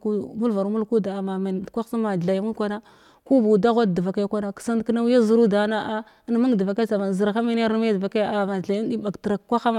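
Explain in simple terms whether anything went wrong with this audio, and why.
Nothing went wrong that I could hear: listening through the speech, no point stood out as a problem.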